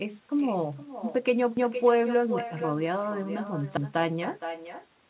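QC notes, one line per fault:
Throughout, echo with no canceller: every phrase returns about half a second later, about 9 dB quieter and thinner, as the far loudspeaker feeds its uncancelled microphone.
1.57–1.77 s and 3.77–3.97 s, overlapping chunks: a 200 ms stutter repeats every 2 s, because each chunk restarts before the previous one finished.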